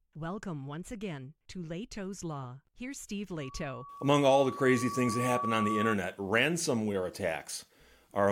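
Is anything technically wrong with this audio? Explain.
Yes. From 3.40 to 5.96 s there is loudspeaker feedback squeal. The microphone re-amplifies its own loudspeaker, so a 1.1 kHz tone swells over about two seconds to roughly 5 dB above the speech.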